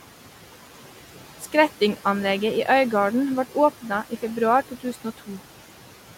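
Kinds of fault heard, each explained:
Noise suppressor artifacts: throughout, steady background is pulled down by about 11 dB frame by frame, so the residue sinks and rises with the speech.
Speech cut by the noise suppressor: from 4.69 to 5.4 s, after "vart åpna i februar", quiet speech mistaken for noise drops by up to about 11 dB, sounding swallowed.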